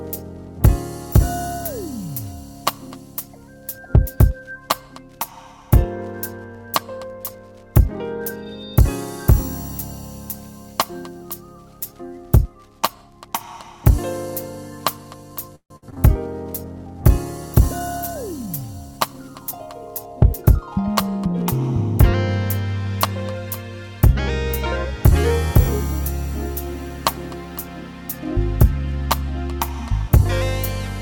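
From 15.55 to 15.98 s, packets went missing again and again in repeated packet loss. Four holes opened, the longest 148 ms, and concealment stretched the last sound across 245 ms while 100 ms simply vanished. Over half that stretch is patched, so the audio turns choppy, with pieces missing.

At 16.28 s a call bitrate drop sets in. The bandwidth estimate fell and the encoder went from 64 to 28 kbps for about 3.6 s, until 19.89 s. Coarser coding and trimmed high frequencies make the sound rougher, watery and duller through that span.

Overlapping its end, from 18.91 to 19.67 s, comes a jitter buffer speed-up. Too much audio had piled up in the buffer, so the receiver cut short pitch-period pieces, about a tenth of a second in all. The audio runs roughly 112% fast at unchanged pitch and sounds hurried.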